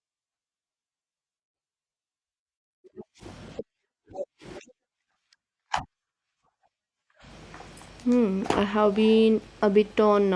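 Listening through the speech, nothing stood out.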